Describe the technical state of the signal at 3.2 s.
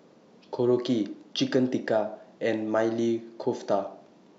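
At 3.2 s the speech signal is intact, with no audible fault at that moment.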